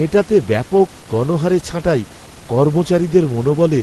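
No technical faults can be heard in this speech.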